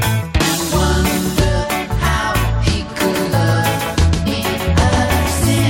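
Corrupted bytes in the compressed stream, which is damaged data, force the decoder to lose frame sync and hunt for the next header, leaving a brief glitch at 0.39 s and again from 4.25 to 4.28 s. From 3.14 s to the end, a doubled audio track appears, likely from a second, slower capture path feeding the same mix. A full-band copy trails by around 150 ms, a few decibels quieter, with no decay or room colour, and it cuts in abruptly.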